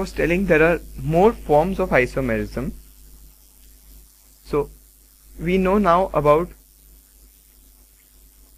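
No technical faults can be heard in this audio, so there is nothing to describe in time order.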